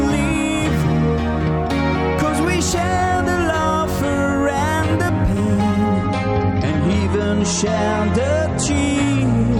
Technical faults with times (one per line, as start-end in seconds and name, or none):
5.94-9.59 adaptive stream at a lower bitrate